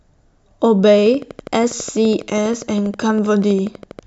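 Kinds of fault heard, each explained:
Train of clicks: a repeating pulse, likely from nearby equipment or a faulty connection, enters the signal. The result is a steady ticking, 12.3 clicks per second, from 0.98 s to 4.0 s. That makes some forty clicks, peaking roughly as loud as the speech.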